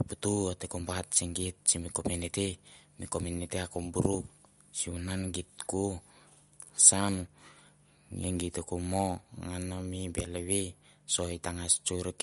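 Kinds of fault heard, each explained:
MP3 compression: Plainly audible, likely from a low bitrate near 54 kbps. Nothing reaches above 11.2 kHz. Weak frequency lines flicker, so the speech sounds watery.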